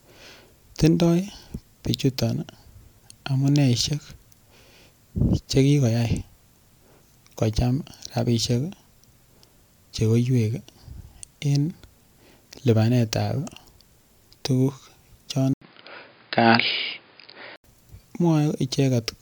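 The input likely switched to a poorer device from 15.54 to 17.64 s. After an 80 ms gap, speech turns dull, cut off above 5 kHz, with faint added noise.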